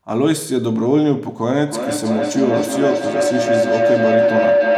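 A microphone-to-loudspeaker loop between two devices in one room closes with more than unity gain. From 1.67 s, a feedback howl builds around 500 Hz, pulsing roughly every 300 ms and peaking about 3 dB above the speech until the clip ends.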